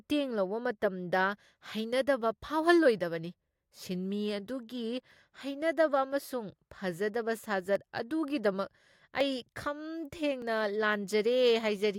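At 7.76 s, 9.21 s and 10.42 s the speech jumps slightly ahead. Each skip removes roughly ten milliseconds, with no silent gap. The likely cause is a dropped buffer (overrun): samples were overwritten before being read, so the two sides join directly.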